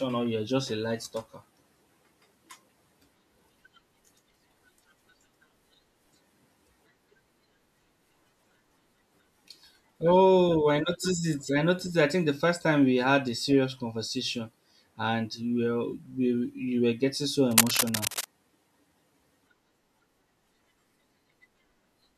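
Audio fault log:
17.51–18.25 s, cable scratch noise: just after "were getting so", dense, uneven scratchy rustling sits over the speech for about 0.74 s at roughly the speech's own level, likely a worn cable or connector being moved so its contact resistance fluctuates rapidly.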